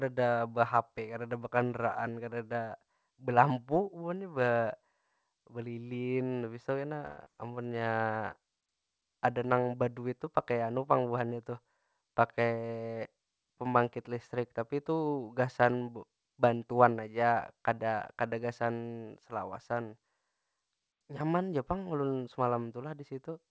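From 7.06 to 7.28 s the speech gives way to a fading buzz stretched from the last sound for about 200 ms, then resumes with roughly 80 ms gone. A long network dropout, shifting the delay by roughly 70 ms, is the likely cause. On a spectrogram, frozen horizontal harmonics smear and fade before the speech resumes abruptly.

Between 7.47 and 7.84 s a jitter buffer slow-down follows as the receiver rebuilds a reserve. Repeated pitch periods add 59 ms, so speech runs at 86% speed with unchanged pitch. The waveform shows near-identical cycles in a row, and the drawn-out harmonics look stretched.

From 11.52 to 12.70 s a jitter buffer speed-up trims surplus buffered audio, cutting around 100 ms in small pitch-period pieces. The speech runs at 109% speed, sounding hurried but not higher. On a spectrogram, syllables appear compressed in time with harmonic spacing intact, all within the 8 kHz band of the G.722 call path.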